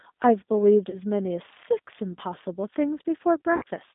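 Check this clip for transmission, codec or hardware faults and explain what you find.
Two faults are audible: codec coloration across the whole clip and two brief dropouts patched by concealment.

Throughout, the speech sounds narrow, slightly rough and synthetic, confined to roughly 200 Hz to 3.7 kHz. This is the G.729 codec, which fits an 8 kbit/s G.729A stream: it rebuilds each 10 ms frame from a vocal-tract filter, a pitch predictor and a few pulses, which plainly roughens the speech.

At 0.90 to 0.97 s, and again at 3.56 to 3.63 s, the speech smears into a buzzy tone or coloured noise that fades. This is VoIP packet loss concealed by the speech codec. About 30 ms and then 60 ms of audio went missing, which points to one lost packet and then two. The decoder stretched its last pitch and filter with falling gain, and because each frame builds on the previous one, the sound stays weak or distorted for tens of milliseconds after each gap.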